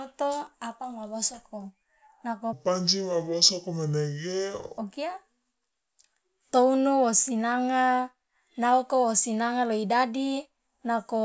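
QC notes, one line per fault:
2.53–4.78 s, wrong sample rate: for this stretch the speech suddenly drops low and drags, running at two-thirds speed with the pitch pulled down by 7 semitones, since speed and pitch move together. That's what you get when samples go out at a slower clock than they were captured at, with no conversion in between. The 0.667 ratio fits 24 kHz material being played at 16 kHz.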